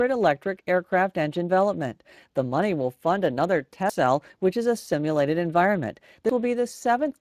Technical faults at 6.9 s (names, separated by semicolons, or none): Speex codec